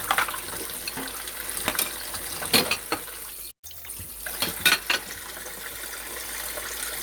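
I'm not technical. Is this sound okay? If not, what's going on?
No. At 3.51 s there is a playback stall: the player likely ran short of data and went silent for about a tenth of a second until 3.65 s. Then comes catch-up at higher speed: from 3.65 to 3.89 s the player rushes through its backlog at 1.5 times normal speed, so the sound briefly runs faster and noticeably higher in pitch before settling back.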